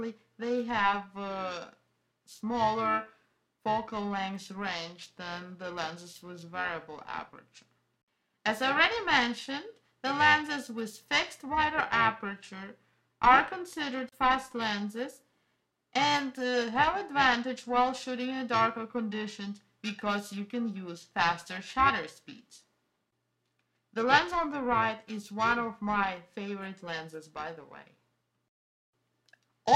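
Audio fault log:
Throughout: periodic clock jitter. The converter's sampling clock is being wobbled at a rate of roughly 1 kHz, so every component of the sound carries sidebands spaced about 1 kHz above and below it, strongest on high-frequency content. This adds a rough, metallic edge that disappears whenever the signal stops.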